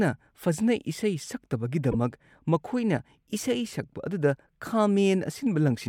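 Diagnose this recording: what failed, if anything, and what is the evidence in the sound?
A short burst of wrong-frequency energy cuts into the speech at 1.92 to 1.95 s, just before "ꯃꯈꯣꯏꯅ ꯏꯁꯩ", and a much fainter one follows at 3.38 s. This is a corrupt frame decoded at the codec stage: each time, a single damaged frame was played with misread values, putting energy at wrong frequencies.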